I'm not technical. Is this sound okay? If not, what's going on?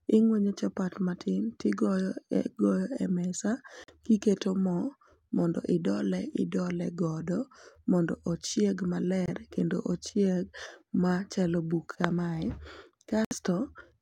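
No. The speech briefly cuts to silence three times, at 3.84 to 3.90 s, 9.26 to 9.29 s, and 13.25 to 13.33 s. This is likely a Bluetooth dropout: the headphones missed some audio. Unlike a stutter, the speech comes back further along, with a bit skipped.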